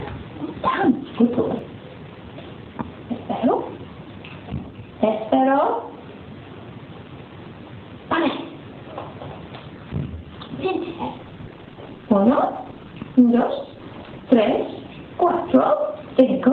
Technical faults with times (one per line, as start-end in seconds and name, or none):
10.85-16.52 call bitrate drop